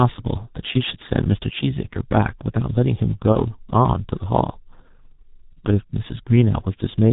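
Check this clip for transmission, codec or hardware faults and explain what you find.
Two faults are present: heavy G.723.1 codec damage across the whole speech clip, and one concealed packet loss.

The G.723.1 codec degrades the speech throughout. Its 30 ms frames and slowly updated vocal model cannot follow fast changes, and nothing above 4 kHz survives. The damage is heavy, consistent with the 6.3 kbit/s mode. Voices come out muffled and hoarse, and consonants smear into one another because their short spectral detail falls between model updates.

VoIP packet loss concealed by the speech codec occurs from 3.32 to 3.39 s. The gap matches one lost 30 ms frame. During the gap the decoder repeats its last pitch and filter state with falling gain, which briefly stretches the sound into a buzzy tone or a coloured noise that fades. Each frame depends on the previous one, so the voice stays weak or distorted for a short while after normal packets resume.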